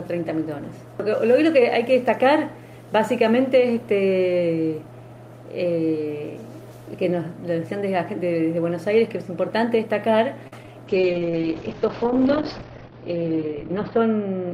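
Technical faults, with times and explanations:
10.47 to 10.53 s, short stall from a late packet: a packet arrived after its playout time and the jitter buffer ran dry, so the receiver held the last sound for about 45 ms until the packet turned up, then carried on from the same point. Nothing is lost, but the sound hangs briefly with a slight buzzy or dipping quality, and playback from there on runs about 45 ms later than before.
10.63 s and 10.66 to 10.68 s, short concealed packet loss: two pieces of roughly 10 ms each never reached the decoder in time, just after the stall. The receiver patched each hole by extending the preceding sound, 8 ms for the first and 14 ms for the second, then blended back into the real signal. The result is a quick smear or wobble twice in rapid succession.
10.88 s to the end, call bitrate drop: the bandwidth estimate fell and the encoder was pushed from 40 kbps down to 10 kbps, staying at the lowest rate for about 3.2 s. 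At that rate Opus codes coarsely and narrows the audio band from 20 kHz to 6 kHz, so the sound turns muffled and rough, with a watery texture, and it has not recovered by the end.
13.47 to 13.91 s, jitter buffer speed-up: the buffer was holding more audio than its target, so the receiver trimmed short pitch-period slices over and over, removing about 40 ms in total. The audio plays roughly 8 percent fast at unchanged pitch, giving this stretch a slightly hurried, pushed feel on top of the muffled low-bitrate sound.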